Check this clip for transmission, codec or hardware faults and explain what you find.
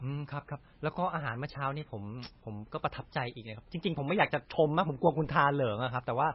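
Two faults run through the whole speech clip: coarse quantisation without dither, and MP3 compression damage.

Low bit depth without dither is present from start to finish. The sound was rounded to a small number of steps with no dither to decorrelate the error, so the error tracks the signal instead of forming a neutral noise floor. It sits roughly 40 dB below the signal, which fits a likely 10-bit rounding stage. Quiet stretches turn grainy, and material that falls below one step collapses or sputters between adjacent levels.

MP3 compression is also audible throughout, with heavy codec damage. Nothing remains above 5.6 kHz, so the treble is cut at a fixed point and sibilance loses its top. The encoder was clearly short of bits, which points to a likely bitrate around 19 kbps. Weak spectral lines are dropped and reappear from frame to frame, producing a watery, swirly texture with metallic chirps on s sounds and smeared attacks.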